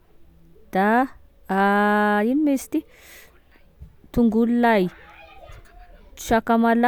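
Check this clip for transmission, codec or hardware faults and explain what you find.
No faults detected.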